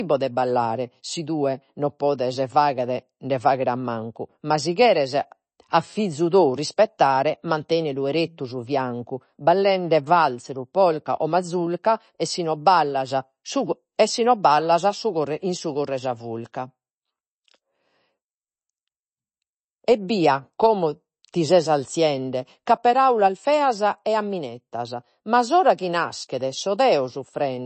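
Speech, with MP3 compression damage plainly audible throughout. Nothing sounds above 8.3 kHz. S sounds turn watery and chirpy as weak frequency lines flicker between frames. That points to a low bitrate around 32 kbps, likely starving the encoder of bits.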